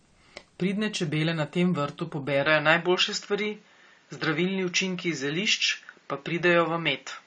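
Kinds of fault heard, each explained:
AAC compression: Dull, smeared speech with plainly audible warbling and nothing above 9 kHz throughout, likely from AAC-LC coding at a low rate, which fits about 32 kbps.
Input switched to a poorer device: From 2.46 s, right after "čebele na tem vrtu", the top end narrows to 7.2 kHz with faint new noise, likely from a switch to a poorer microphone.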